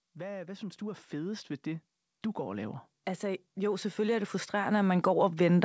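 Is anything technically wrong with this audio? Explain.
Yes. From about 0.05 s right through to the end, there's automatic gain rising: the call's gain control decided the input was too quiet and kept nudging its gain up, so the speech and the background noise swell together steadily across the whole clip. The top end stops around 8 kHz, which fits a G.722 wideband call path.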